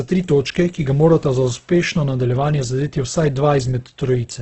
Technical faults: Opus compression

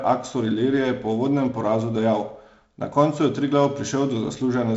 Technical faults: none

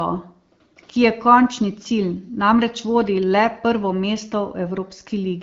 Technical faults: none

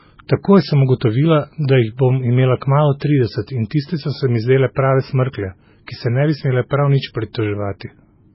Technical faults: low-bitrate audio saved at a high bitrate

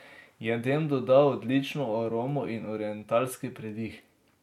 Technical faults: none

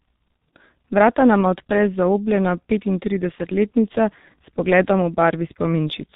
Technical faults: G.723.1 codec; VoIP packet loss concealed by the speech codec

